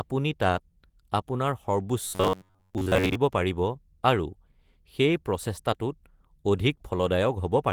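From 2.05 to 3.15 s the speech becomes a rigid, metallic buzz near 94 Hz that only loosely follows the words. This is robotic sound from repeated short buffers, likely from audio arriving too seldom, so a slice of about 10.7 ms loops for most of that stretch.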